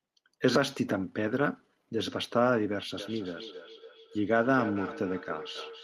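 From 2.95 s to the end, a feedback echo between two devices appears. A second device in the room replays this speech into the microphone again, repeating it about every third of a second at up to about 13 dB below the speech. Unlike room reverberation, the return comes at a fixed interval as a distinct repeat.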